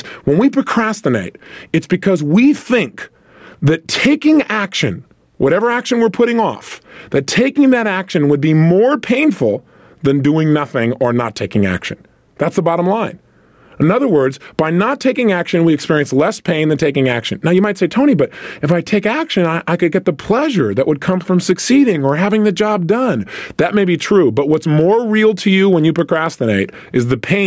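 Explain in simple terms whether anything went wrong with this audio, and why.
There's gain pumping all through the recording: loud and soft parts end up squashed closer together in level, likely from a heavy limiter fighting a hot microphone.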